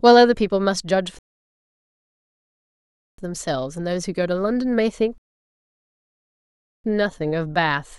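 A speech clip with two rebuffering stalls: playback goes silent from 1.19 to 3.18 s and again from 5.18 to 6.84 s, then picks up exactly where it left off. The player ran dry and waited for more data, adding about 2.0 s and 1.7 s without losing anything.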